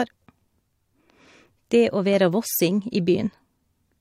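Nothing goes wrong anywhere in this bit of speech; there's simply no technical fault to point to.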